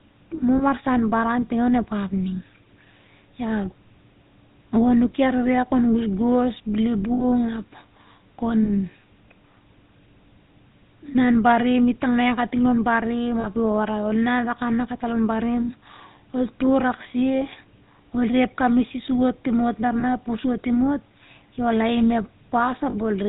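The whole recording carries GSM full-rate codec damage. The codec models the vocal tract and drives it with sparse, regularly spaced pulses, which gives the speech a plainly audible buzzy, gravelly roughness and cuts everything above 4 kHz. The sound fits the 13 kbps full-rate coder.

Lost GSM frames break in at 0.58 to 0.62 s, just before "baran ting onep ap", then at 7.14 to 7.25 s, 8.64 to 8.70 s, 13.4 to 13.47 s, 20.0 to 20.04 s and 22.9 to 22.95 s. These gaps last 20, 60, 20, 40, 20 and 40 ms, which fits one to three 20 ms frames. In each gap the decoder repeats the last good frame's settings, so the speech briefly turns into a rough, metallic ring.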